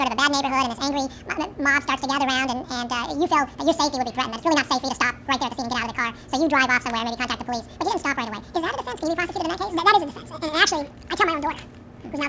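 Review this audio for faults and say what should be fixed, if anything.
Wrong sample rate throughout: the samples are clocked out twice as fast as they were captured, with no resampling, which fits 8 kHz audio played at 16 kHz. Everything runs at double speed and a full octave (12 semitones) higher, sounding squeaky and rushed. To prevent it, carry the source rate with the audio and resample to the output rate before playback.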